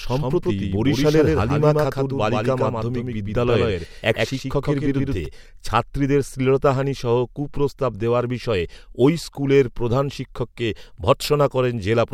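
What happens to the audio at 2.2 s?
At 2.2 s a doubled audio track is sounding, already under way when the clip begins and ending abruptly at 5.26 s. A second, full-band copy of the speech, likely from a slower capture path, trails about 150 ms behind, roughly 5 dB quieter and without room colour.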